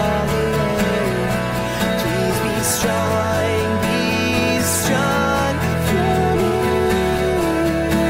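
The audio has periodic USB or driver dropouts. Brief silent gaps of a couple of milliseconds tick every 1.024 s from 1.05 s to 7.18 s.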